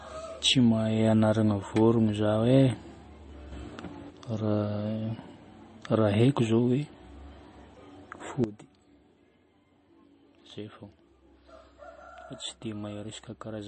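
From the start the speech sounds watery and swirly, with smeared consonant attacks and metallic, chirping s sounds. This points to MP3 compression, likely at a very low bitrate that fits about 32 kbps. The encoder runs short of bits, so it discards the treble entirely and lets weak frequency lines flicker in and out between frames. On a spectrogram the energy stops at a hard ceiling near 8.3 kHz, and the region below it is full of isolated blocks that switch on and off.

At 3.52 s the level leaps up by about 6 dB in a single step and stays there until 4.10 s, when it drops straight back. This sudden gain jump is likely a digital gain change applied with no ramp. The background noise rises and falls together with the speech. On the waveform the envelope shows a raised block with vertical edges at both ends.

At 8.44 s a second sudden gain jump cuts the level by about 13 dB, and it stays down to the end of the clip. 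Speech and noise floor both fall at once. The waveform shrinks abruptly to a much smaller envelope, and on the spectrogram every frequency band darkens along one sharp vertical line.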